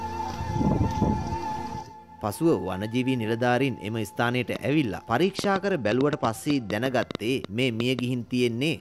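From 4.56 to 8.00 s a train of clicks, around fifteen irregular pulses at about 4.7 per second and roughly 15 dB above the sound, likely comes from interference, showing as thin vertical spikes. From 5.22 to 6.70 s a Bluetooth SBC bit pool drop dulls the treble and adds grit. On a spectrogram the top band empties, which fits a bit pool falling from 28 to 12, near 96 kbps.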